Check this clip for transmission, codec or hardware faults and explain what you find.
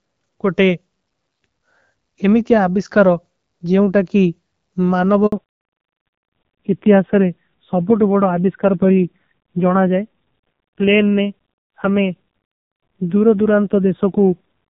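Two faults show up, both around the 5.3 s mark. At 5.26 s there is a handover gap: the call switched networks and no speech frames arrived for 60 ms, so the sound cuts to silence until 5.32 s. From 5.32 s to the end there is a fallback to narrowband: the call left HD Voice, heard beforehand as clear wideband speech with only light codec colouring, for a low-rate narrowband codec, consistent with AMR-NB at 5.9 kbit/s. Nothing above 4 kHz remains, so the speech sounds duller, muffled and rougher.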